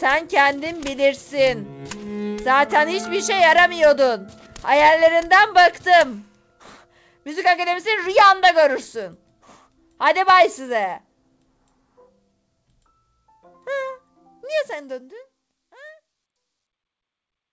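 The audio carries no technical faults, with content stopping at 8 kHz as expected from a G.722 call codec path and a smooth, deliberate fade-out over the last few seconds.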